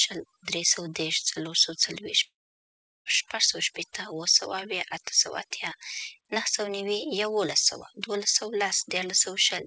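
A speech recording in which the background sinks to near silence dotted with twinkling specks throughout. That is overdone noise removal: the suppressor was set so aggressively that every frequency band near its noise estimate gets pushed down or switched off, taking the quieter parts of the voice with it. From 2.24 to 3.07 s the sound gives way to a brief fading buzz, then about 0.75 s of silence, and resumes with a chunk of speech gone. This is likely a long network dropout: for roughly 0.8 s no audio reached the receiver, which stretched the last sound out and let it decay before playback picked up again after the gap. Above all this, the call codec cuts everything off above 8 kHz, which fits a G.722 link.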